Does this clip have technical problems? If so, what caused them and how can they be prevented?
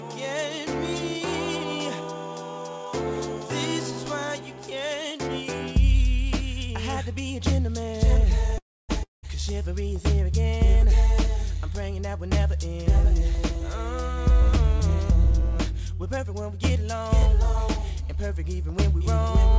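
Yes. From 8.58 to 8.91 s there is a call audio freeze, likely from packets held up in transit until the jitter buffer ran dry. The receiver stretched the last sound into a fading buzz that gives way to about a quarter second of silence, then resumed where it left off, so roughly 0.31 s of gap was inserted and nothing was lost. A larger jitter buffer target and a steadier network route would prevent this.

Right after, from 9.03 to 9.25 s, comes a long network dropout. No audio reached the receiver for about 0.2 s, which likely points to packets lost outright. The receiver again filled with a decaying buzz and then silence, and when sound returns that 0.2 s of material is simply missing, so the audio jumps forward. Forward error correction or redundant packet encoding would help recover from this kind of loss.

Between 14.30 and 17.23 s a jitter buffer speed-up is audible. After the earlier delay, the buffer held more audio than its target, so the receiver trimmed short pitch-period slices many times in a row to catch up. 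Playback runs about 9% fast at unchanged pitch and sounds hurried, dropping roughly 0.3 s in total. A shorter burst from 17.82 to 18.24 s runs about 7% fast and drops around 40 ms. Smoother packet delivery, or a buffer that adapts more gradually, would avoid these rushed passages.

Throughout the clip, nothing is present above 8 kHz, which fits a wideband call codec such as G.722.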